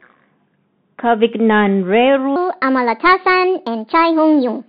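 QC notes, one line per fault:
Throughout: Bluetooth CVSD headset codec. The speech sits in a narrow band from 150 Hz to 3.6 kHz, with nothing above. The damage is plainly audible. The coding sends one bit per sample, only up or down, which fits a 64 kbps CVSD stream. Its adaptive step cannot keep up with loud, bright sounds. So these edges distort. S sounds come out scratchy. A fine, granular hiss runs under the speech.
2.36 s to the end: section at the wrong speed. From here the speech plays 1.3 times too fast. Pitch and tempo rise together. The rise is about five semitones. The speech turns high and hurried at once, with no glide into it. The likely cause is this stretch being played against the wrong clock. Earlier speech keeps its natural speed.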